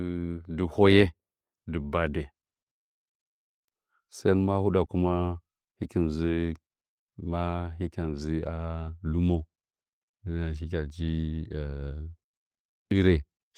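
At 4.85 to 4.89 s there's a short concealed packet loss: about 20 ms of the speech never arrived in time, so the decoder stretched out the last sound to cover the hole and then blended back in. You hear it as a quick smear or wobble.

Then at 5.99 s and again at 8.87 to 8.89 s, a single lost packet was rebuilt from error correction each time. The following packet carried a low-bitrate copy of the missing 20 ms, so nothing drops out, but those moments come through rougher and noisier.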